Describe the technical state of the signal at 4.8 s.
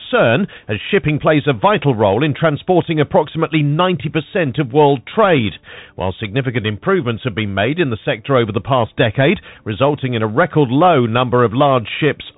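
At 4.8 s you're hearing the Bluetooth CVSD headset codec that runs through the whole clip. It codes each sample as a single up-or-down bit with an adapting step, consistent with a 64 kbps stream, so nothing above 4 kHz survives, s sounds turn scratchy, and a granular hiss sits underneath.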